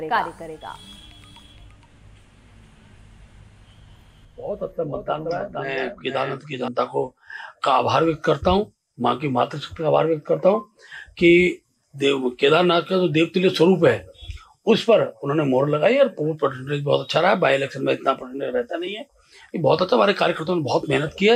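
From the start of the clip until 6.68 s, a doubled audio track is present, likely because the same signal was picked up a second time through a slower path, or an edit left two copies out of step. A second, full-band copy trails the original by about half a second, a few decibels quieter, with no decay or room colour. It sounds like a dry, flat repeat that stops abruptly at 6.68 s.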